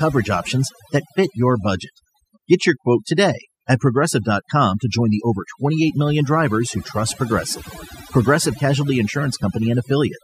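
From the first second to the last, you're hearing overdone noise removal. A denoiser was pushed too hard, so any frequency band sitting close to its idea of the noise floor got pulled way down or switched off entirely. Trouble is, the softer parts of the voice live down there too, so they got carved away. The gaps drop away and break up into little twinkly specks.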